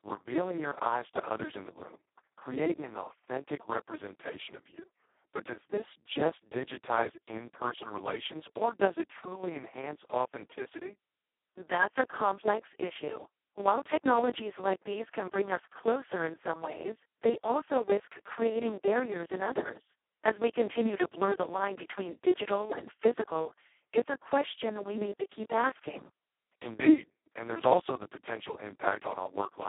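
From start to end the speech carries heavy Speex codec damage. The sound is hoarse, noisy and close to robotic, which points to the lowest Speex setting, roughly 2 kbps. At that rate the CELP coder has almost no bits left for the excitation and behaves nearly like a vocoder. The audio is confined to a telephone band of 300 Hz to 3.4 kHz, with nothing audible above 3.8 kHz.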